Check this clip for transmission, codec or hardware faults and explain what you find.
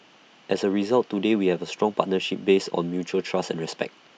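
No faults turn up in this clip.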